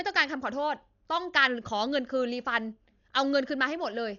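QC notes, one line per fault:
throughout Dolby Digital compression: heavily damaged, dull speech, nothing above 7 kHz, rough fluttering dither noise filling starved frequency lines, fitting a likely encode near 48 kbps.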